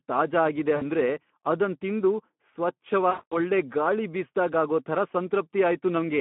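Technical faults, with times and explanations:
Throughout, Speex codec: the speech sounds hoarse and grainy, with plainly audible codec damage. The excitation is starved of bits, which fits a Speex rate near 11 kbps, and the line band runs only from 150 Hz to 3.4 kHz.
0.75–0.84 s, VoIP packet loss concealed by the speech codec: right after "ತಾಜಾ ಆಗಿದೆ", about 60 ms goes missing. The decoder stretches its last pitch and filter into a brief buzzy tone or coloured noise that fades, and the sound stays weak as it recovers.
3.09–3.37 s, VoIP packet loss concealed by the speech codec: a longer gap of about 220 ms, just before "ಒಳ್ಳೆ ಗಾಳಿ ಬೀಸ್ದಾಗ್ ಆಗೋ". The extrapolated sound drags on and fades, and leaves the following audio distorted briefly.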